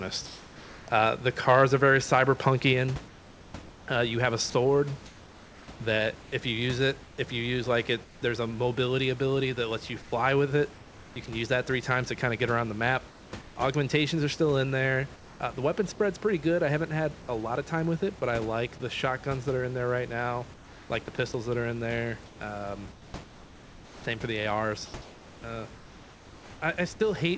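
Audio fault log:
0.26–0.88 s, 3.08–8.22 s, 10.02–11.16 s, 13.08–13.56 s and 15.16–15.40 s, comfort noise in place of the background: in the pauses the sender likely stopped transmitting under discontinuous transmission, and the receiver filled the gaps with synthesised noise. The real room background, about 21 to 22 dB below the loud speech, turns into a smooth, featureless hiss. It is about 1 dB quieter at the start and about 3 dB quieter near 15.2 s. The fill adds up to roughly 620 ms, 1.8 s, 520 ms, 380 ms and 240 ms. The long stretch ends just before "a mobility ability that", and the 10.02 s stretch sits between "ability that lets you" and "can use that three".
4.50–4.54 s, sound dropped by the voice detector: inside the long pause-fill stretch, the detector likely mistook a brief bit of quiet sound for background and stopped sending. About 40 ms of real audio is missing, and steady synthetic noise plays in its place. 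This leaves a tiny hole, before the signal returns when the detector triggers again.
20.54–25.44 s, sound chopped by the voice detector: right after "in there right now", the detector likely toggled between sending and muting more than once. In total, about 2.1 s of this stretch is replaced by comfort noise. Quiet syllables and word edges vanish into the fill, so the speech sounds choppy. The fill is band-limited like the rest of the G.722 call path, with nothing above 8 kHz.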